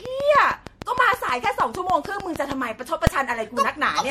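Repeated lossy re-encoding is the likely cause of the generation loss running through this speech recording: the material appears to have passed through an MP3 codec about four times, each pass re-quantising on a shifted frame grid, and the result fits a 64 kbit/s chain. The accumulated damage leaves the speech sounding swirly, hollow and smeared beyond what one encode at that rate would give, with consonant attacks blurred and nothing present above 16.6 kHz. From 0.06 s to 2.53 s a train of clicks rides over the recording, most likely interference or a faulty connection injecting a pulse at a steady 6.5 times per second. The clicks are regularly spaced and alike in shape, about fifteen in all, peaking roughly 15 dB above the speech, so they are heard as an even ticking that continues through the pauses as well as under the speech. At 3.07 s a calculation produced invalid numbers at full scale: for 2.9 ms, which fits a 128-sample processing block, the output was pinned at maximum value instead of carrying audio. 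Because the block is so short, it comes across as a single sharp bang, far louder than anything around it.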